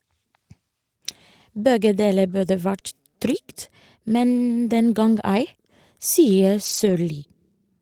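Speech with a lost packet rebuilt from error correction at 5.15 s and across 6.65 to 6.95 s. Lower-bitrate backup copies fill the losses, so nothing drops out, but those frames sound rougher and noisier. A spectrogram shows no gap, only briefly smeared, grainier texture there.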